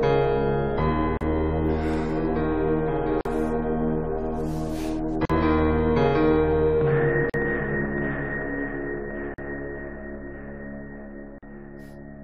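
Silent gaps at 1.17, 3.21, 5.25, 7.30, 9.34 and 11.38 s (37 ms first, then 43 ms) are gaps at joins of encoded pieces. Separately encoded chunks kept their start delay and end padding. Unlike dropouts, they recur every 2 s and the sound resumes exactly where it stopped.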